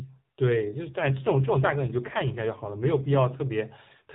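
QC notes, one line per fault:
0.46 to 3.44 s, AMR rate drop: The speech turns rougher, buzzier and more synthetic, then recovers. The band stays narrow throughout, with nothing above 4 kHz, and there is no gap or dropout. The codec has fallen back to fewer bits per 20 ms frame, with more of them spent on error protection. Fewer pulses describe the voice, so it loses detail. The change in roughness fits a switch from 12.2 to 5.9 kbps AMR-NB and back.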